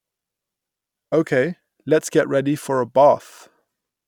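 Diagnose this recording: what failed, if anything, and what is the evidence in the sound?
Nothing in this speech recording points to a failure at any stage of the chain. No audible event in it calls for a diagnosis.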